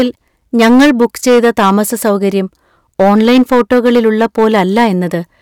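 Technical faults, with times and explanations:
Throughout, hard clipping: a harsh fuzz on every loud syllable. The speech is driven about 9 dB past full scale, so roughly 7% of samples are flattened.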